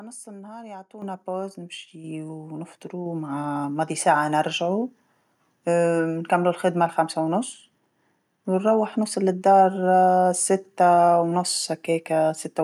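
The microphone volume gets stepped up three times: right after "نص النهار" at 1.02 s by about 10 dB, at 2.04 s by about 5 dB, and at 3.06 s by about 4 dB just before "مع ماضي". Each time the input gain jumps in one go, so speech and background both get abruptly louder together.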